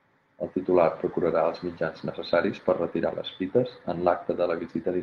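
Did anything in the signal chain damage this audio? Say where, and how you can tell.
Yes. A lost packet rebuilt from error correction, at the network and codec stage. Between "necessaris per" and "les fites", from 3.07 to 3.09 s, the speech roughens and turns noisier for a moment. There is no gap or dropout. That 20 ms stretch fits a single lost packet. The following packet carried a low-bitrate copy of it, and the decoder played that copy in its place. Continuity survived, but detail was lost.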